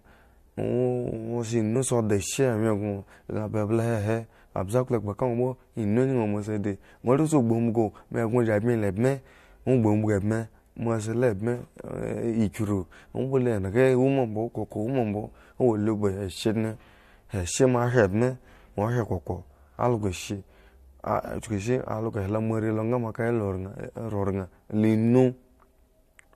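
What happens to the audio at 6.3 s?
Nothing goes wrong at 6.3 s; the speech carries on intact through that moment with no audible fault.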